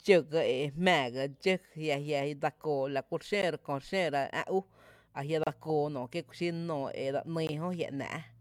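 Speech breaks off four times with a gap between stream segments, at 1.43 s, 3.42 s, 5.43 to 5.47 s, and 7.47 to 7.49 s. The timestamps of consecutive 2-second segments don't quite meet, so the player inserts silence, about 4, 13, 32 and 19 ms long, without losing any audio. Each one sounds like a hard tick or dropout. A waveform shows a flat line with abrupt edges, and a spectrogram shows a thin, empty vertical band across all frequencies, recurring about every 2 s.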